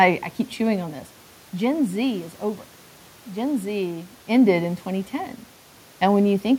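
The speech signal shows no technical faults, with room noise in the background and level shifts near half a second and again around 4 s that come from the talker moving relative to the microphone rather than from the system.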